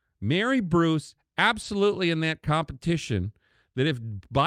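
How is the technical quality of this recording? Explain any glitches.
There's one glitch worth flagging, a short stall from a late packet, from 1.61 to 1.65 s. A packet showed up late, the jitter buffer ran dry, and the receiver stretched the last bit of speech by about 20 ms until it arrived. Nothing's actually lost, but that sound hangs a touch too long, with a faint buzz or dip, and everything after it runs 20 ms later.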